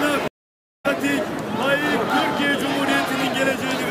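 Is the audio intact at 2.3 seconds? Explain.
Yes, the audio is intact at 2.3 seconds, with no dropout, click, distortion or other fault audible at that point.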